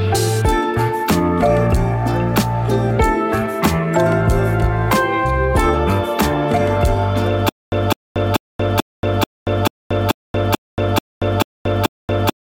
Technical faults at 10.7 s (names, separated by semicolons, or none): stutter with silent gaps